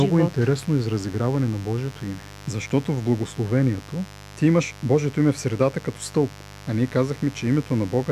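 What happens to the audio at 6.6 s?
At 6.6 s the speech sits on top of a mains buzz that runs through the whole clip rather than starting or stopping there. Sharp switching spikes, such as those from a dimmer, rectifier or poor shielding, enter twice per cycle of the 50 Hz supply, so the interference carries a long series of harmonics up into the kilohertz range. It sounds like a steady, raspy buzz, roughly 20 dB below the speech.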